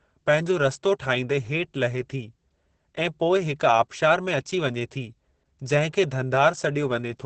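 Speech throughout with heavy Opus voice compression: nothing above 8.6 kHz, and a muffled, hoarse, faintly robotic SILK texture that points to roughly 10 kbps.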